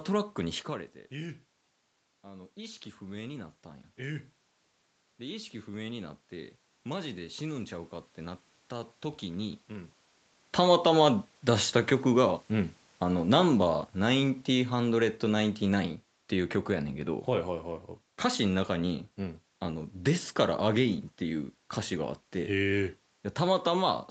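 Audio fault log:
0.68–10.98 s, automatic gain rising: shortly after the talker moves back from the microphone near 0.5 s, the input drops by about 14 dB, and the automatic gain control answers by lifting its gain about 8 dB over roughly ten seconds. Voice and room noise swell together, slowly, which is how it differs from a talker simply leaning in. A closer talker brings only the voice up, while here the background noise climbs at the same rate.
10.44–15.91 s, automatic gain falling: after the talker returns near 10 s, the input is suddenly too loud for the raised gain, so the level starts high and the automatic gain control pulls it down by about 6 dB across some five seconds. The voice and its background sink together. A talker moving away would lower only the voice and leave the room level steady. The top end stops near 8 kHz through the Opus call path, which fits a 32 kbps wideband setting.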